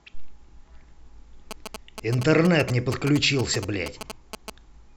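From 1.51 s to 4.5 s, GSM signalling bursts break into the speech. A nearby 2G phone is sending short groups of radio bursts, and the audio circuit rectifies them. They sound like galloping ticks and brief 217 Hz buzzes, about 10 dB below the speech.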